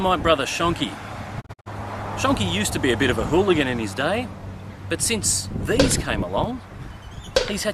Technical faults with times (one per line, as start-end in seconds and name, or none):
1.40-1.68 digital broadcast dropout